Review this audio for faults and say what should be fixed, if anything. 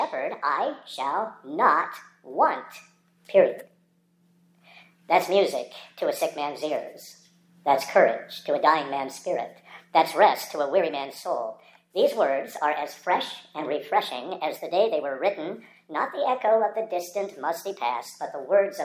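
A wrong sample rate runs through the whole clip: everything plays about 1.45 times too fast and roughly 6.45 semitones sharp, which fits audio captured at 22 kHz being played back at 32 kHz without conversion. On a spectrogram, every harmonic and formant sits stretched upward by the same ratio and events are compressed in time; the waveform looks squeezed horizontally. Resample explicitly to the output device's rate, or tag files with their true rate.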